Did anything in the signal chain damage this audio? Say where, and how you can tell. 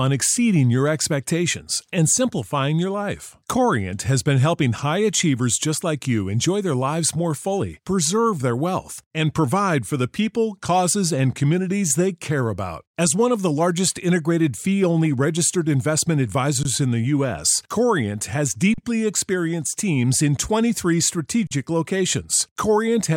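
Yes. Three brief flat freezes at 16.63–16.65 s after "fee only registered investment", 18.74–18.78 s before "experienced teams in", and 21.47–21.51 s resume softly with nothing skipped. This is an underrun with held sample at the buffer: the converter held its last value until data returned.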